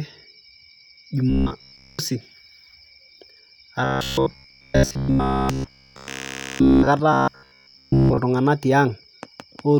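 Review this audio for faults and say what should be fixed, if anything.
A rigid, metallic buzz pitched at 66.7 Hz runs through the speech at 1.30–1.99 s, 3.84–6.87 s and 7.13–8.18 s. It is likely robotic sound from repeated short buffers: a 15 ms chunk replays while most, and later nearly all, incoming audio is skipped. To prevent it, give the audio path enough buffering and scheduling headroom that fresh data always arrives before playback needs it.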